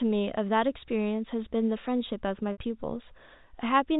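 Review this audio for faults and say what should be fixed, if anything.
Packet loss with pitch repetition at 2.52 to 2.58 s: a 60 ms gap is filled by repeating the last pitch period, heard as a buzzy sound fading into silence before speech returns with a short cross-fade, which fits six lost 10 ms packets. Forward error correction or a deeper jitter buffer on the G.711 telephone link would prevent this.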